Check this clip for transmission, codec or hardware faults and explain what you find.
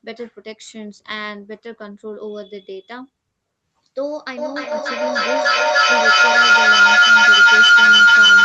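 There's one clear fault, a feedback howl, running from 4.37 s right to the end at 8.44 s. Two devices in the same room are sharing the call, so each mic-to-speaker round trip adds gain. It narrows into a tone around 1.5 kHz, with the loop repeating roughly every 300 ms and peaking about 19 dB above the speech, all within the call's 8 kHz band.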